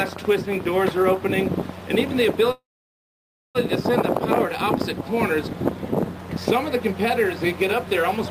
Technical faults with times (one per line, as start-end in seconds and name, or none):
2.51-3.57 call audio freeze